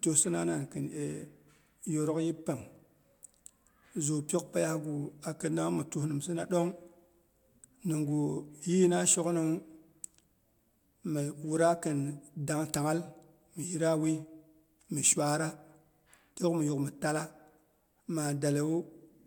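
Speech recording, with no technical faults heard anywhere.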